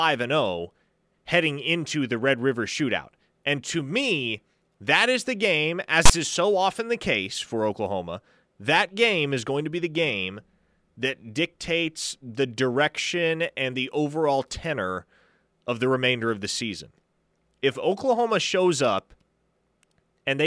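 At 6.06 to 6.10 s there's a short, hard-edged rasp, lopsided to one side: file tags played as audio, with text metadata read straight through as speech samples.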